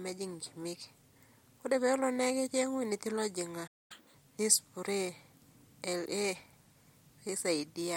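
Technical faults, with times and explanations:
3.67–3.92 s, playback stall: the speech just cuts out mid-flow and you get about a quarter of a second of dead silence, roughly 230 ms. It doesn't sound like a pause in the talking; it sounds like the output simply stopped getting fed. That's most likely the player running dry on data, or its audio thread getting blocked for a moment, so nothing reaches the output until it recovers and picks up again.
3.92–4.14 s, catch-up at higher speed: right after the gap the speech comes back rushed, running at double speed for a little over 0.2 s, and the pitch jumps up by roughly ten semitones, so it sounds chipmunky for that stretch. The player is resampling its backlog faster to win back the time the stall cost it. Because it speeds up by resampling, the pitch rises along with the tempo. Once the backlog is cleared, both snap back to normal.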